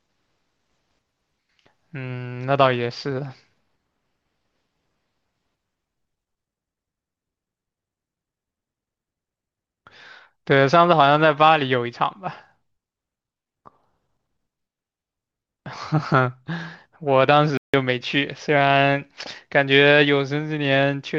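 A speech clip with a playback stall from 17.57 to 17.74 s: the output drops to silence for about 160 ms mid-flow, then resumes. This is likely the player starving for data or its thread being blocked briefly, halting output until it recovered.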